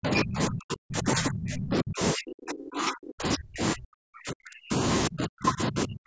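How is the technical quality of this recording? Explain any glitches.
The recording has one recurring fault: the speech is repeatedly pushed down or cut out for most of its length.

Speech suppressed in double talk runs from 0.0 to 4.73 s and again from 5.08 to 6.06 s. Likely an echo canceller mistook the talker for loudspeaker echo while both sides spoke, so the voice dips by as much as about 40 dB, thinning and breaking into fragments. The call microphone processing limits the band to nothing above 8 kHz.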